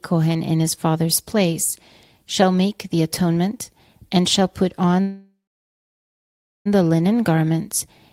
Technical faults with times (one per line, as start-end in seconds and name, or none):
5.01-6.67 call audio freeze